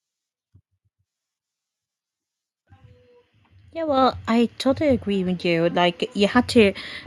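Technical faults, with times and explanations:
3.73 to 6.83 s, automatic gain rising: speech and background swell together by about 6 dB as the gain control, judging the input too quiet, turns it up.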